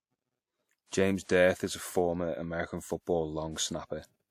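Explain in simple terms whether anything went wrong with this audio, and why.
Pre-echo appears at 0.86 s and 1.23 s, just before "is a former american". The compression works in blocks and spreads its noise across each one, so a short hiss lasting about 55 ms leaks in ahead of a sudden sound and blurs its start.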